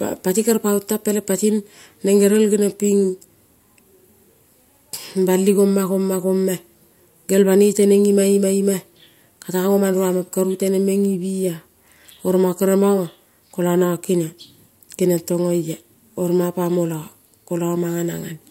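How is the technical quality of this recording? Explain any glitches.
The technical quality of the recording holds up, with no glitches to explain.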